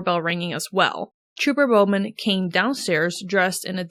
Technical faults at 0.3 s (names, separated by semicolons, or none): repeated buffer